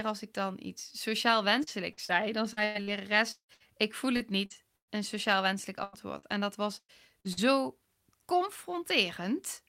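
From 1.63 to 4.91 s the speech breaks up with repeated packet loss, giving a robotic sound. Short holes arrive one after another, the longest about 174 ms. Each hole is filled by stretching the last sound forward, so roughly a fifth of the stretch is patched in. This gives a choppy sound with pieces missing. The same fault returns from 5.84 to 7.39 s, with shorter holes of up to 97 ms.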